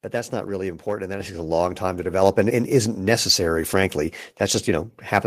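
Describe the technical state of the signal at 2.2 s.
At 2.22 s, just after "long time to", the microphone volume is stepped up: the call software judged the input too quiet and raised the device's input gain in a single step. Voice and background jump together by about 4 dB, holding that level into "and and isn't necessary".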